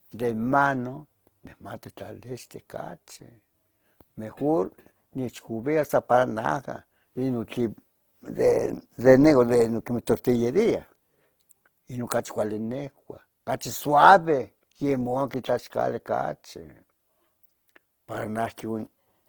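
Throughout the speech, voiced sounds come out noisy, rough and grainy. This is the plainly audible mark of likely Opus compression in its CELT music mode, at a rate that points to around 16 kbps. A spectrogram shows bands filled with speckled noise rather than holes, still reaching about 20 kHz.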